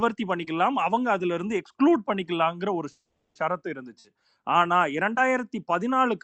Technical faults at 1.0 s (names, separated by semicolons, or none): none